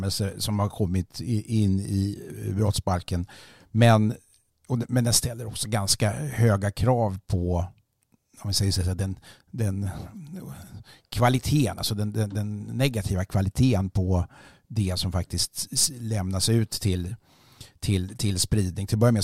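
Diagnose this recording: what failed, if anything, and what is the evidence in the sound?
Nothing failed in this recording; the sound carries no evidence of a fault at any stage.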